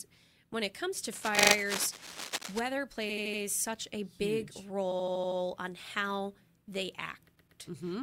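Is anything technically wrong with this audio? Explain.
Yes. From 1.12 to 2.60 s, just after "when it comes to", the likely cause is a worn cable or connector being moved, its contact resistance jumping about, which produces cable scratch noise: dense, uneven scratching only a little below the speech level. Repeated frames also occur, where a short run of compressed frames is decoded several times, so the same slice replays as a stutter: a 40 ms block plays four extra times from 1.37 to 1.54 s; an 80 ms block plays four extra times from 3.09 to 3.41 s, just before "such a"; an 80 ms block plays six extra times from 4.91 to 5.39 s, just before "on how"; and a 120 ms block plays two extra times from 7.35 to 7.59 s. Together these add 1.2 s to the audio.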